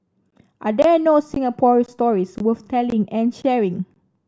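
Gap between chunks: hard-edged holes of about 20 ms at 0.30, 0.82, 1.34, 1.86, 2.38, 2.90, 3.42 and 3.94 s, where silence gets inserted between half-second chunks of the speech.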